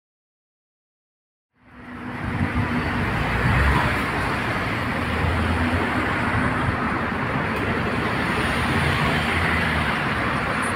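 The signal carries no technical faults; the level rises gradually from around 1.5 s to full level at 2.89 s, an ordinary edited fade-in with no click or hard edge.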